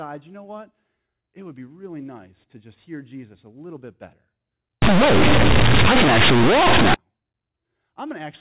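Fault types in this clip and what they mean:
Companded audio read as linear: from about 4.82 to 6.94 s the speech turns into a harsh, very loud buzz, with heavy noise filling the pauses. The mu-law bytes are being played as plain 8-bit samples without being expanded, so every sign change swings across roughly half the output range. Quiet sound ends up as big as loud sound and the waveform gets badly bent, in contrast to the surrounding 4 kHz-limited phone-line audio.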